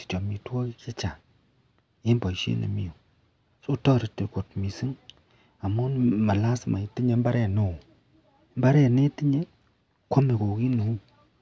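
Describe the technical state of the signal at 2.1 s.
At 2.1 s the speech signal is intact, with no audible fault at that moment.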